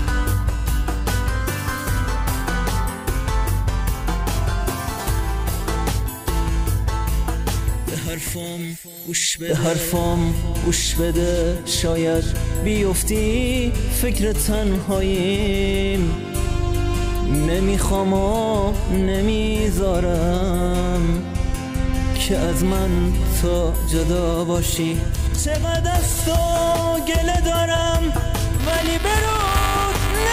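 From 28.60 s to the end of the clip at 30.32 s, the writing program and the playback hardware fall out of step around their ring buffer, producing buffer tearing. The two pointers cross within each period, so a small slice of every buffer replays audio from roughly ten milliseconds earlier, hard-spliced at both edges. The result is a robotic buzz at 345 Hz, which fits a 128-sample buffer, riding on the signal until it stops.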